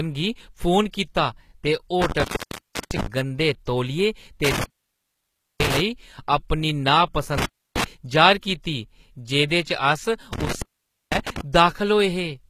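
Throughout the speech, s sounds and other treble come across gritty and metallic, and nothing is present above about 14.9 kHz. The codec damage is plainly audible, and the likely cause is HE-AAC compression at a rate that points to around 20 kbps. Only the lower band is actually coded. The treble is synthesised by copying lower bands upward under a coarse envelope, so its harmonics fail to line up with those below the crossover.

From 2.02 to 3.06 s the sound breaks up: it crackles at the edges, and for about 0.66 s of that span it is open, leaving hiss. The same intermittent contact returns from 4.44 to 5.80 s with an opening of about 0.96 s, from 7.38 to 7.84 s with about 0.30 s open, and from 10.33 to 11.41 s with about 0.50 s open. Each time, a loose cable or plug briefly loses connection, cutting the signal.

Within the first break, two attacks are smeared and preceded by a short hiss: one at 2.36 to 2.39 s, spreading about 33 ms, and one at 2.80 to 2.83 s, spreading about 36 ms. 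A third comes at 11.53 s, about 11 ms. This is pre-echo. The transform codec spreads quantisation noise across an entire block, so when an attack falls late in the block, noise sized for the loud onset spills into the quiet moment just before it.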